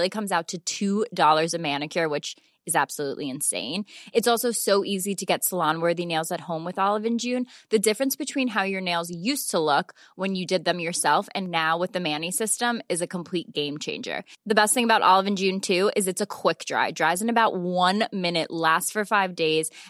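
No technical fault can be heard anywhere in this speech recording, and the signal holds steady throughout.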